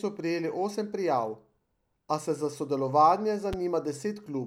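A loud pop at 3.53 s: a single sharp thump, roughly 10 dB above the speech, likely from a voltage spike such as a plug or switch transient.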